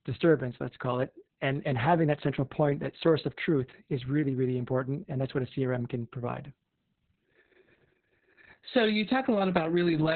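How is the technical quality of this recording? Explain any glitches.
Technical quality is poor: the whole speech clip is marked by Opus voice compression at a very low rate. From start to finish nothing reaches above about 4.4 kHz, so the voice is confined to narrowband. The SILK coder models the voice with linear prediction and codes its excitation coarsely, which makes it muffled, hoarse and faintly robotic. That points to a bitrate around 6 kbps. A plain low-pass filter would only dull the sound; this adds grainy, synthetic roughness.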